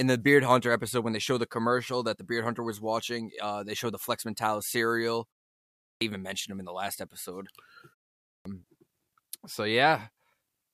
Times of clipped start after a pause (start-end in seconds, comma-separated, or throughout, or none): 5.72-6.01, 8.18-8.45